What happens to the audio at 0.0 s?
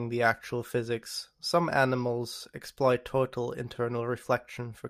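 Nothing goes wrong at 0.0 s; the audio is intact there, with no audible fault at that moment.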